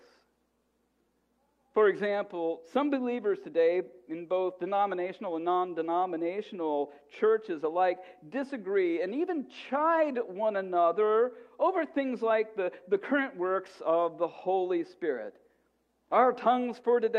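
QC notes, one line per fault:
No technical faults are audible anywhere in the signal.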